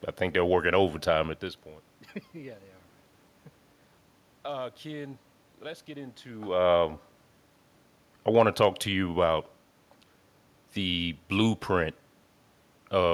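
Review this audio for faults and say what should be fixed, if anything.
Nothing here needs fixing: the room's own background noise is just part of the recording, and the level shifts around a second and a half and again near six seconds are only the talker moving relative to the microphone.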